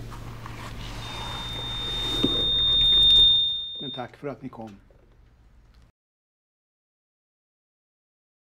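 From 1.02 to 4.12 s, loudspeaker feedback squeal builds over about two seconds into a 3.6 kHz tone well above the signal, as the mic-speaker loop gain exceeds one. From 3.22 to 3.69 s, zipper noise ticks through a fall of roughly 25 dB, applied in unsmoothed 2 dB steps at around thirty per second.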